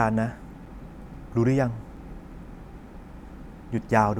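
At 1.96 s a block of digital silence, about 5.3 ms of zeroed samples that fits a 256-sample buffer, cuts the speech abruptly, producing a short tick.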